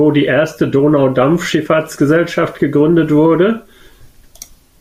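No technical faults can be heard anywhere in this speech recording. Nothing interrupts or alters the sound at any point.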